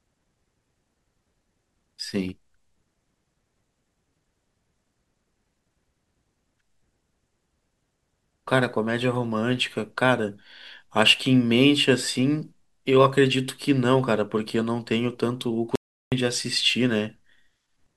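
At 15.76 s the speech cuts out in an audio dropout to silence, returning at 16.12 s. The 0.36 s gap is silent, with no room tone, so the input was likely lost briefly while recording continued, and that span is missing.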